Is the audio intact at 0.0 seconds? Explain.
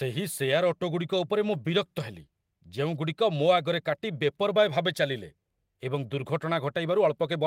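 Yes, the audio is intact at 0.0 seconds, with no fault at that moment.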